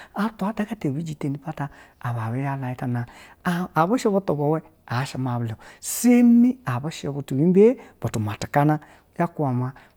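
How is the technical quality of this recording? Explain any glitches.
No technical faults can be heard anywhere in the recording, so there are no glitches to explain.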